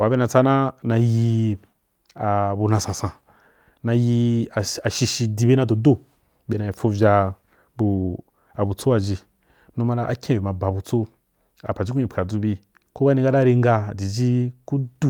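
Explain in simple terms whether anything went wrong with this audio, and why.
Nothing went wrong; the recording sounds as it should.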